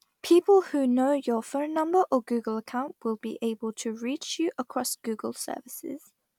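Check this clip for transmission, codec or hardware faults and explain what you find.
Nothing audible points to a transmission, codec or hardware fault in this speech recording.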